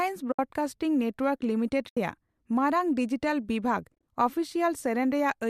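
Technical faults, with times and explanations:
0.32–0.39 s, 1.89–1.97 s and 3.95–4.03 s: AAC frame loss with muting. About 70 ms, then 80 ms, then 60 ms drop out. The decoder zeroes the missing frames, and the overlapping windows fade sound out and back in, so you get soft-edged holes rather than clicks. The gap lengths fit short 10 ms frames, likely from the low-delay AAC in use. The last one is patchier, with brief gaps spread over about 80 ms, the longest around 30 ms.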